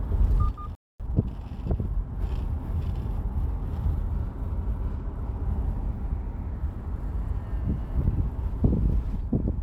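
At 0.75 s the sound cuts out mid-flow and stays silent for about a quarter of a second, until 1.00 s. This is a playback stall. The player was likely starved of data or its output thread was briefly blocked. The gap is too long to be a brief dropout.

From 1.00 s to 1.98 s the player works off the backlog with time-compressed catch-up, running about 1.25 times faster than normal. It removes small slices and cross-fades across the joins. The result sounds hurried but keeps its original pitch. A simple sample-rate speed-up would instead raise the pitch along with the tempo. After 1.98 s the timing returns to normal.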